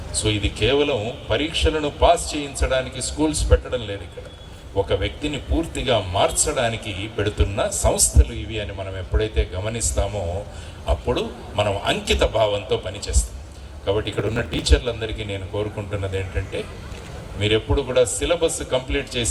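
From 14.05 to 14.66 s the processor falls behind and misses a long run of buffer deadlines, a few dozen of very short buffers of around 1.5 ms. Each missed buffer is skipped, leaving a hard-edged gap, so the sound tears into a gritty processor overload crackle that stops once the load eases.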